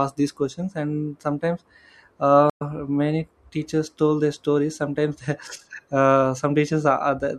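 At 2.50 s a stream reconnect restarts the decoder mid-stream. The speech drops to silence for 0.11 s and resumes slightly ahead at 2.62 s.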